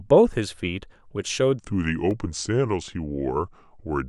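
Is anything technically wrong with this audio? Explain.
Yes, there are two kinds of fault in this speech.

Blocks of digital silence occur at 0.33 s (2.9 ms, which fits an unfilled 128-sample buffer) and at 2.11 s (1.7 ms). Each abrupt drop to zero and back sounds like a tick. The waveform shows a short flat line, and the spectrogram shows a thin vertical break with broadband click edges.

A section at the wrong speed runs from 1.59 s to the end. It plays at 0.815 times normal speed, so the voice is about four semitones lower and slower, likely from being clocked wrongly. On a spectrogram the harmonics sit lower and are stretched in time.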